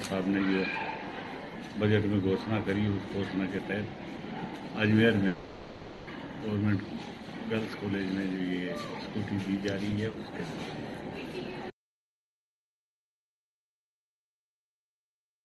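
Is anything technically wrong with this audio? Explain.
Yes, there are two gaps in the sound.

From 5.27 to 6.08 s there is a long network dropout, most likely from packets that never arrived. For about 0.8 s the receiver had nothing to play, so it stretched the last sound it had into a buzzy, hissy continuation that fades. No true silence is left in the gap. When the sound resumes, that 0.8 s of material has been skipped. The synthetic tail filling the gap is what separates this from a plain cut.

From 11.71 s to the end there is an audio dropout to silence, likely from a lost input such as a disconnected device, a failed link or an accidental mute while recording continued. The sound stops mid-flow and never returns. Everything after that point is dead silence with no room tone, and whatever occurred there is gone. Unlike the earlier dropout, nothing is concealed. There is no decaying buzz, only an abrupt switch to nothing. 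The top end, which stops near 12 kHz, fits an Opus call path at around 32 kbps.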